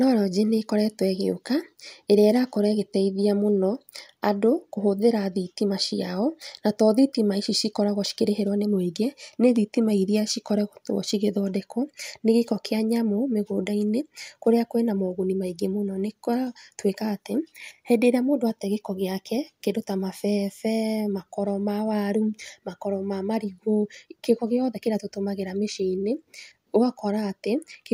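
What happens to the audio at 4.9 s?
Nothing goes wrong at 4.9 s; the audio is intact there, with no dropout, click, distortion or other fault at that moment.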